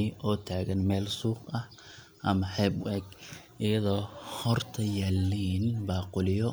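No technical faults can be heard anywhere in the speech recording; the signal stays continuous and steady throughout.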